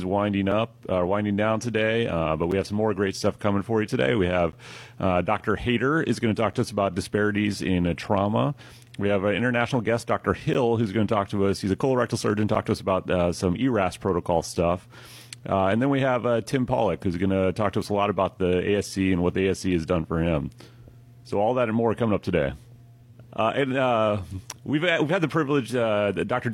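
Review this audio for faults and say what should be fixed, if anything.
Short silent gaps between stream segments occur at 0.51, 2.51, 4.52, 6.53, 8.53, 10.54, 12.55 and 14.55 s. Each is a hard-edged dropout of 3 to 13 ms, repeating every 2 s, which points to 2 s segments whose timestamps do not quite meet. The player fills each mismatch with silence, so nothing is lost, but the sound is briefly cut. To fix this, align segment timestamps at the packager so each segment starts exactly where the previous one ends.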